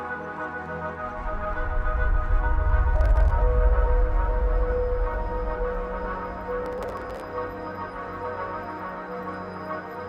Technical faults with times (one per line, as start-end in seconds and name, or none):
2.96-3.31 processor overload crackle
6.66-7.24 processor overload crackle